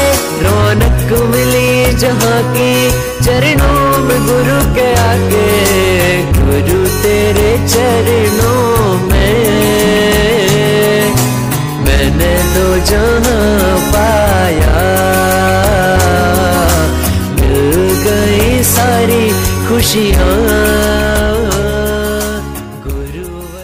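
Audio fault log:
throughout hard clipping: the signal is driven about 6 dB past what the stage can pass, so roughly a fifth of the samples are cut flat, giving a harsh fuzz on every loud sound. The waveform shows squared-off peaks; the spectrogram shows harmonics smeared far upward.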